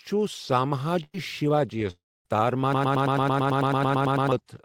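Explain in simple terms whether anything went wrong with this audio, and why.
A burst of packet loss hits at 1.03 to 1.15 s. A short run of the speech, about a tenth of a second, never arrived in time to be played. To cover the hole, the player kept stretching the last bit of sound it had and let it fade, leaving roughly 40 ms of near-silence at the end. When the speech picks up again, the piece that belonged in that gap is simply missing.

A long network dropout follows at 1.91 to 2.26 s. For about a third of a second the sound smears into a fading buzz or hiss, and then most of that stretch, around a quarter of a second, goes quiet before the speech returns. That pattern is most likely a longer break in the connection, where nothing reached the listener and the player could only fill the start of the gap before giving up. About 350 ms of speech is lost.

A broken-record loop runs from 2.73 to 4.32 s. 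One tiny slice of sound, about 110 ms long, plays over and over, 14 times back to back, like a stuck record. This likely happened because the player or stream stalled and kept resending the last fragment it held instead of moving on. Whatever should have been heard during those one and a half seconds never comes through.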